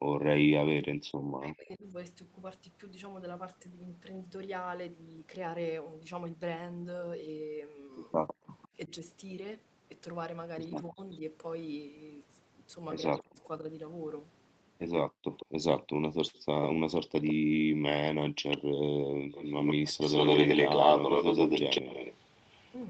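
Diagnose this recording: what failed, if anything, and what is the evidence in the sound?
Background gated by the echo canceller, call processing: at 0.0–0.13 s and 15.1–17.71 s the room sound drops about 40 dB, showing as blank gaps in the waveform's noise floor.

Speech suppressed in double talk, call processing: between 0.58–1.94 s and 8.39–13.39 s the speech dips by around 40 dB in short pieces, likely from suppression while both ends talked. The spectrogram shows chopped, faded harmonics.

Echo leak, call processing: from 8.11 s to 22.76 s a copy of the speech trails 153 ms behind at a level close to the original, likely from an incompletely cancelled loudspeaker echo. The spectrogram shows doubled, offset onsets.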